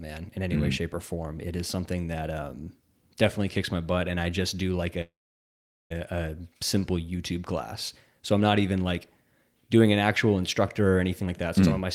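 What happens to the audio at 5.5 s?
At 5.5 s the clip is inside a call audio freeze running from 5.01 to 5.92 s, likely caused by packets being held up in transit until the receiver's jitter buffer ran dry. The receiver stretched the last sound into a fading buzz or hiss, which dies away to silence for about 780 ms of the 890 ms gap. When delivery resumes, the audio picks up where it stopped, nothing lost, but now running 890 ms later.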